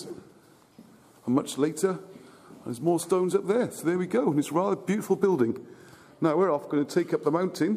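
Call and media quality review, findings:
No audible faults found on review; nothing to attribute to any component in the path.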